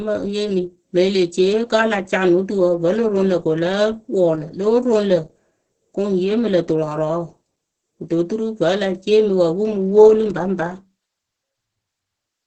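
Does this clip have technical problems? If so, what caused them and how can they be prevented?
Yes. Throughout, the speech carries Opus voice compression damage: nothing above 8.5 kHz, and a muffled, hoarse, slightly robotic quality from the SILK coder quantising its excitation coarsely, which fits a bitrate near 10 kbps. Prevent it by encoding at a substantially higher bitrate.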